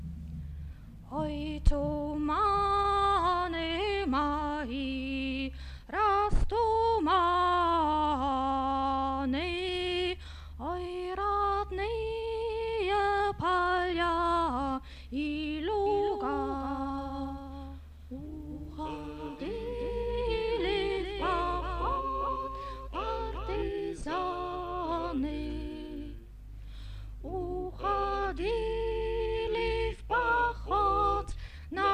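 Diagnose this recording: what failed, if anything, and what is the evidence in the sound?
From 15.86 to 23.62 s a doubled audio track appears: a dry, full-band copy roughly 0.4 s late and about 10 dB down, likely from a second, slower capture path.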